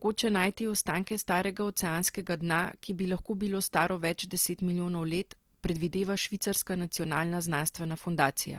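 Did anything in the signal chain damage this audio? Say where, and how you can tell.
Yes. The damage sits at the codec stage, most likely Opus compression in its music-oriented CELT mode, running short of bits across the whole clip. The speech stays full in bandwidth, with no narrowing or muffling, but its voiced tones come out rough and grainy, with a noisy texture over the harmonics throughout. That fits an encoder that preserves each band's energy yet fills starved bands with folded or noise content, at a rate that points to something near 24 kbps.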